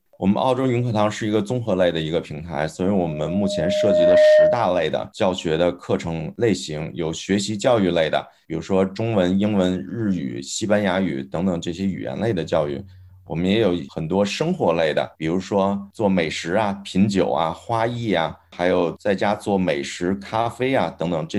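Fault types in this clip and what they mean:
Loudspeaker feedback squeal: a steady 610 Hz tone swells over about a second and a half into a piercing squeal, ending up around 10 dB louder than the rest of the sound, from 2.83 to 4.83 s; a microphone is re-amplifying its own loudspeaker until that frequency runs away.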